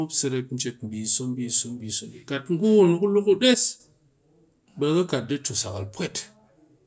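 A speech recording with no technical fault to report. Nothing in it calls for a time, a value or a cause.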